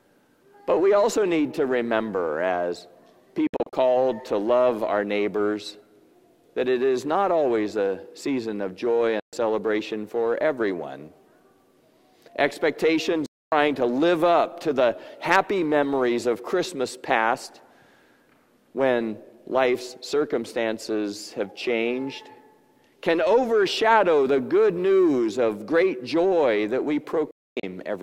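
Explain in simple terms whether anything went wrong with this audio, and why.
A digital broadcast dropout: the receiver lost the signal and muted, so the sound cuts to silence at 3.47–3.73 s (several short holes), 9.20–9.33 s, 13.26–13.52 s and 27.31–27.64 s. Whatever played during those gaps is gone.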